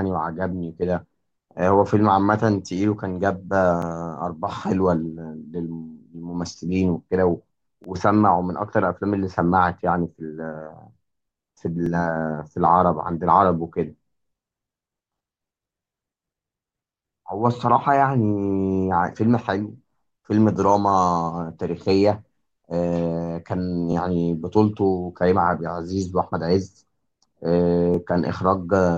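Speech with overlapping chunks. A stutter-click occurs at 3.82, 7.84, 11.86, 23.92 and 27.94 s. Each chunk is 4.0 s long and starts before the last one ends. So 20 ms of sound plays twice at every join, giving a regular hiccup.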